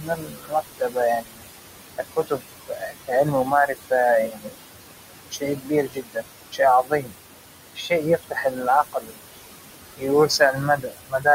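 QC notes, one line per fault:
Throughout: noise suppressor artifacts. The room noise, sitting only about 9 dB below the speech, is pulled down by about 20 dB wherever the suppressor judges a band to be steady noise, frame by frame. It drops away in the gaps and swells back under speech.
0.00 to 11.27 s, in six stretches (0.00–1.43, 1.98–3.92, 4.27–4.65, 5.30–7.13, 7.75–9.40, 9.97–11.27 s): speech cut by the noise suppressor. Within each stretch, parts of the speech, roughly a second at most and a few hundred milliseconds in the shortest, are mistaken for noise and turned down by about 20 to 22 dB at worst. Soft consonants, word endings and quieter syllables sound swallowed or faint because they fall too close to the noise floor for the suppressor to tell them apart.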